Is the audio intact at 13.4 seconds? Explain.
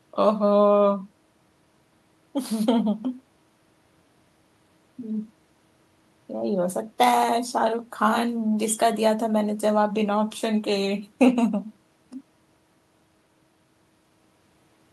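Yes, the audio is intact at 13.4 seconds, with no dropout, click, distortion or other fault at that moment.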